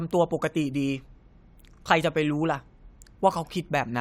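No technical faults can be heard anywhere in the recording. The speech continues throughout without any audible problem.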